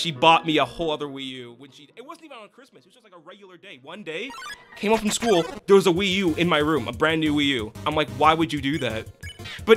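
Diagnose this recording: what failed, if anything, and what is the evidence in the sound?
The gain stage in the driver or buffer path applied its level changes in unsmoothed 2 dB jumps, and each jump left a small click, producing zipper noise. From 0.66 to 2.07 s the level falls by about 25 dB at roughly ten steps a second, heard as a slow ticking riding on the sound. From 3.66 to 4.57 s it climbs back by about 25 dB at a faster rate, near fifteen steps a second.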